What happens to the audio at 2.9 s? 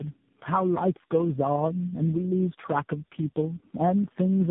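At 2.9 s the speech sounds rough, muffled and warbly, with nothing above 3.7 kHz. This is tandem speech coding present throughout: four speech codecs in a row, each re-coding the last one's degraded output.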